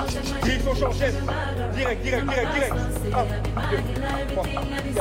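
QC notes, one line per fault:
No faults heard anywhere in this clip.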